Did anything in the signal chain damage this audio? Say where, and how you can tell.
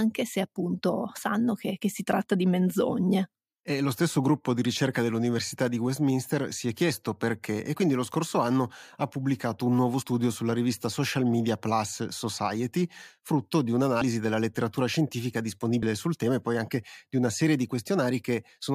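Yes. At the codec or storage stage, compressed frames were skipped, so whole 23.2 ms frames never play. The speech jumps ahead by about two frames at 10.01 s, after "ha pubblicato un nuovo", and at 14.00 s, after "frutto di", then by about four frames at 15.82 s, before "sul tema e poi".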